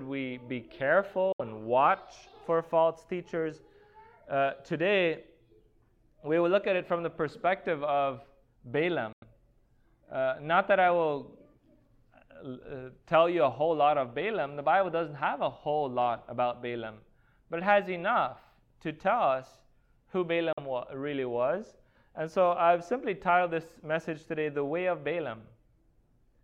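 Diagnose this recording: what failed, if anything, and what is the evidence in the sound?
The audio drops out three times, at 1.32 s for about 70 ms, at 9.13 s for about 93 ms and at 20.53 s for about 46 ms. Each gap is a short hole of silence with abrupt edges or a fade of a few milliseconds. After it, the sound picks up further along, as though it had kept playing through the gap. This points to the playback stage over a wireless link, most likely a Bluetooth dropout: a few audio packets missed their delivery deadline to the headphones and were discarded, so the output went silent until good packets came.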